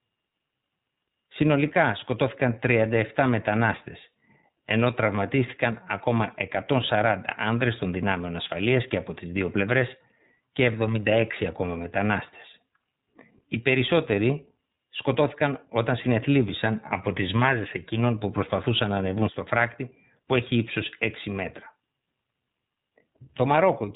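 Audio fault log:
throughout, iLBC codec: the speech is band-limited with nothing above 3.8 kHz, so sibilants and breath lose their top and the sound is boxy and telephone-like. The coding damage is plainly audible as a slightly rough, synthetic grain. This codec rebuilds the excitation of each frame on its own, without leaning on the previous one, and the texture fits its 15.2 kbps mode with 20 ms frames.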